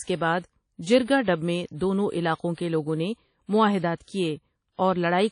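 WMA compression runs throughout the speech, likely the cause of the plainly audible codec damage. Nothing survives above about 10.1 kHz, and the block-based quantisation noise leaves a ringing, washy hiss that points to a low bitrate near 32 kbps.

Pre-echo appears from 3.95 to 4.01 s. Noise sized for a sharp attack near the end of a transform block spills into the quieter moment before it, so a 53 ms hiss precedes the onset and softens it.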